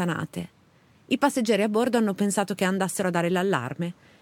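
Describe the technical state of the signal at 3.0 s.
At 3.0 s the speech signal is intact, with no audible dropout, distortion, or other technical fault at that moment.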